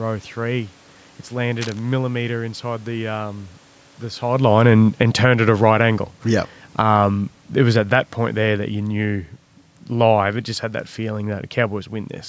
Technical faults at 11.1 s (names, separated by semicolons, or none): none